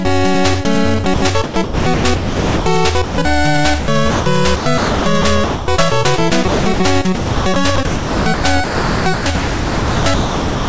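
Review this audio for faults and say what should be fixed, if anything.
Sound chopped by the voice detector occurs five times: 1.04 to 2.66 s, 3.80 to 4.26 s, 4.56 to 5.68 s, 6.48 to 6.80 s, and 7.16 s to the end. Within each stretch, real sound alternates with synthetic noise. About 1.04 s, 0.24 s, 0.64 s, 0.24 s and 2.63 s are replaced. The likely cause is a sender voice detector gating repeatedly and inserting comfort noise. Fix it by lowering the detector's threshold and lengthening its hangover time.

Sound dropped by the voice detector occurs once, from 3.04 to 3.18 s. For those 140 ms, the sound gives way to steady noise or near silence and then returns. This likely comes from the detector judging quiet sound as background, stopping transmission, and leaving the receiver to play comfort noise. The G.722 path carries nothing above 8 kHz. Prevent this by disabling discontinuous transmission or making the detector less aggressive.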